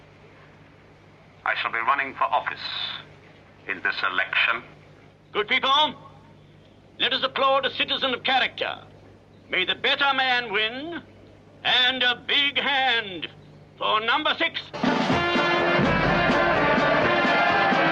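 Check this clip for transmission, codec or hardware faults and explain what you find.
There is one fault, gain pumping, present for the whole clip. The gain drops back each time a loud sound arrives and recovers afterwards, a swing of around 5 dB. The likely cause is input gain set too high for the microphone, with a fast limiter or compressor clamping each peak and then releasing. Loud and quiet passages end up squeezed together, giving a flattened, squashed quality.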